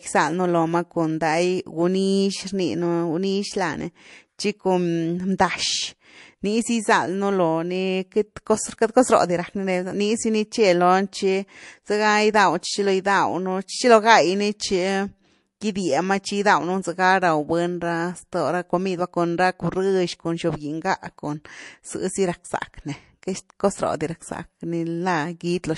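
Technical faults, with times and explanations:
Throughout, MP3 compression: the speech has a plainly audible watery, swirly quality, with s sounds turning metallic as weak frequency lines flicker on and off between frames. That's likely an encoder starved of bits, which fits around 48 kbps.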